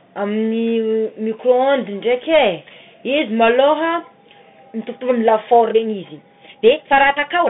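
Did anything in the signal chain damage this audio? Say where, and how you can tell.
Yes, two problems. First, at the codec stage, there's a Bluetooth CVSD headset codec across the whole clip. The band sits at roughly 150 Hz to 3.7 kHz, s sounds come out scratchy, and there's a grainy hiss underneath. That fits a 64 kbit/s one-bit delta coder whose adaptive step can't keep up with fast, loud highs.

Second, from 5.42 s to the end at 7.49 s, the speech suddenly runs about 1.44 times faster with no pitch change, and it sounds rushed. That's likely a time-stretched section applied in software, which drops short chunks of audio to squeeze the timing while keeping the pitch.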